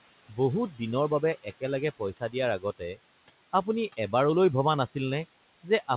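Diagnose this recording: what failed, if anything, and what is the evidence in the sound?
The failure sits in the call-processing stage, in the noise suppressor, and its artifacts run through the whole clip. Between phrases the background sinks by about 17 dB, then swells back up under the speech. The room noise is only about 16 dB below the speech, so the suppressor has to work hard. Frame by frame, it lowers each frequency band it judges to be steady noise, and those gains switch rapidly from one frame to the next.

The same stage also cut into the speech between 2.6 and 2.97 s. Within that stretch, parts of the speech turn faint and swallowed, with soft consonants or endings dropping by as much as about 11 dB, amounting to roughly a tenth of a second in all. The suppressor mistook those low-level speech components for noise and turned them down along with the background. The 4 kHz ceiling on the sound comes from the narrowband call codec, consistent with G.711 A-law, and is not a fault.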